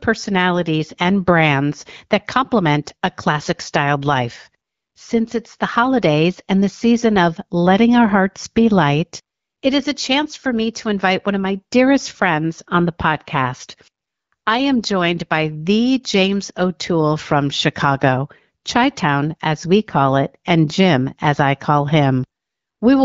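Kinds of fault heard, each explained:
No faults heard in this speech.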